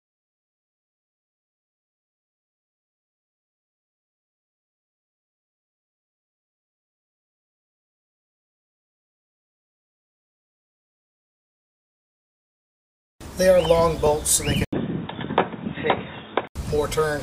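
At 14.65 s the sound likely switches to a poorer input device. After an 80 ms gap, a flat silent stretch in the waveform, it turns boxy and a few decibels quieter, with a faint new noise floor. Until 16.55 s the spectrogram shows nothing above 3.8 kHz.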